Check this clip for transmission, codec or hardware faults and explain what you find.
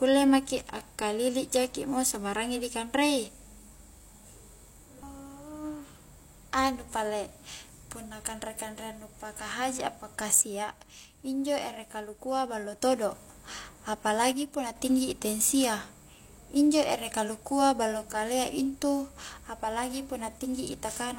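One channel drops out twice, from 10.41 to 12.81 s and from 14.33 to 14.76 s. One stereo side is likely lost in the signal path, so the mono sum keeps only half of the shared speech. The level falls abruptly by about 6 dB, then snaps back.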